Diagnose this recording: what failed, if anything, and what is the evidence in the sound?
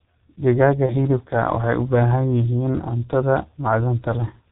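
G.723.1 codec damage runs through the whole recording, at the codec stage. The speech is muffled with nothing above 4 kHz, the voice has a hoarse, rough quality, and consonants are smeared. The damage is heavy and fits a bitrate of about 6.3 kbit/s. The codec models the voice in 30 ms frames and updates that model slowly, so fast articulation and high-frequency detail are lost before the signal ever reaches the listener.

VoIP packet loss concealed by the speech codec occurs at 0.86 to 0.93 s, at the network stage. For about 30 ms the speech is stretched into a buzzy tone or coloured noise that fades, and the voice stays weak or distorted into the following frame. This fits a single lost 30 ms frame. The decoder filled the gap by extrapolating its last pitch and filter with falling gain, and because each frame builds on the previous one, recovery lags after packets resume.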